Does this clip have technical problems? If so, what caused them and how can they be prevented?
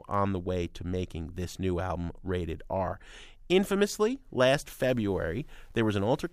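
Yes. From 4.59 s to 6.32 s the speech turns grainy, grit rising and falling with it, likely low bit depth without dither from truncation to 9 bits. Unlike steady hiss, this noise follows the signal. Prevent it by keeping more bits or adding dither before reducing word length.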